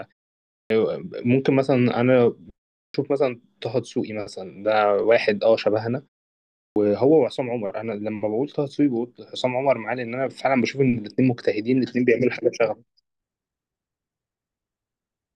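At 0.56, 2.81 and 6.61 s, speech returns with a clipped start after a pause. Each pause of 0.31 to 0.61 s lets the output device sleep. It wakes late and swallows 133 to 150 ms. Words begin abruptly, missing their first sounds.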